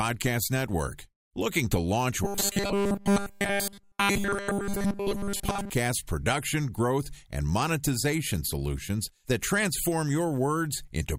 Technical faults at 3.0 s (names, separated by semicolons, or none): robotic sound from repeated short buffers